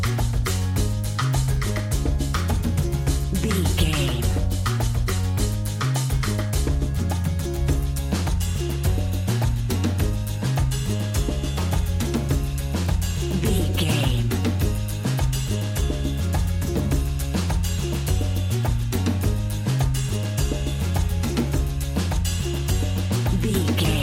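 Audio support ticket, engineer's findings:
No technical faults identified in the signal path; no dropouts, clipping, timing discontinuities or level anomalies detected on review.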